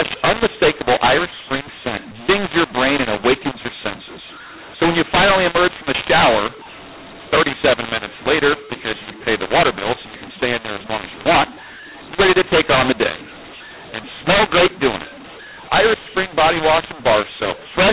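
Throughout, mu-law and A-law are mixed up: mu-law samples decoded as A-law scramble levels, making the speech harsh and distorted and filling pauses with noise.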